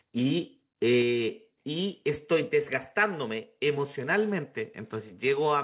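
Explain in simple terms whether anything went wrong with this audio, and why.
At 1.02 s the speech suddenly gets a little quieter, and the background quietens with it, all in one instant step. This is most likely a microphone volume stepped down: the call software turned down the microphone's input setting. It differs from a smooth automatic level adjustment, which would glide down gradually, and from a dropout, because nothing goes missing; the sound simply continues at a lower level. The call line itself, which carries nothing above 4 kHz, is working as designed.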